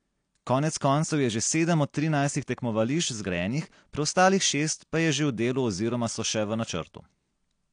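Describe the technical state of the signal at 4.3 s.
At 4.3 s the speech carries the damage that runs through the whole clip: it is dull and smeared, with a fizzy, warbling texture on sustained sounds and sibilants, and nothing above 9.8 kHz. The likely cause is AAC compression at a low bitrate, consistent with about 32 kbps, which cuts the top band and quantises the remaining spectrum coarsely. A simple low-pass filter would dull the sound just as much but without the warble.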